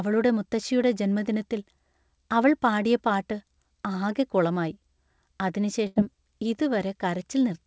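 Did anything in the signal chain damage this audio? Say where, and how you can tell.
Yes. At 5.87 to 5.99 s, a burst of packet loss in the network stage cuts the speech. The receiver fills about 88 ms by stretching the last sound into a fading buzz or hiss. That concealment tail, not silence or a click, separates it from a buffer dropout.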